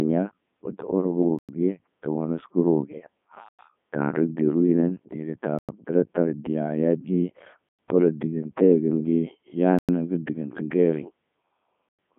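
From start to finish the speech carries the sound of the Codec 2 vocoder. Rather than preserving the waveform, the decoder rebuilds each frame from sine waves driven by pitch, voicing, energy and a spectral envelope, so the voice comes out robotic and buzzy, with heavy damage consistent with the 3.2 kbit/s mode. A spectrogram shows energy only between about 150 Hz and 3.5 kHz, with nothing above 3.7 kHz, and evenly spaced harmonic stripes instead of natural texture.

Layered on top is a gap between chunks, heard as six hard-edged holes of 100 ms each at 1.39–1.49, 3.49–3.59, 5.59–5.69, 7.69–7.79, 9.79–9.89 and 11.89–11.99 s. The audio was delivered in 2.0 s chunks with silence inserted at each join, so no material goes missing, but the flow stops abruptly every 2.1 s. On a waveform these appear as flat silent strips with square edges, and on a spectrogram as clean vertical blank bands.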